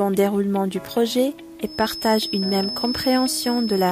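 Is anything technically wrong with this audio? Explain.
Yes. From 1.62 s to the end, a thin, steady whistle at 5.2 kHz sits roughly 10 dB beneath the sound, swelling and fading slowly in level. This feedback whistle likely comes from a loudspeaker-to-microphone loop held just at the edge of feedback, sustaining that single tone.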